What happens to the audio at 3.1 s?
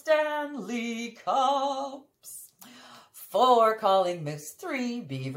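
Nothing goes wrong at 3.1 s; the audio runs through that moment intact, with no dropout, click or distortion.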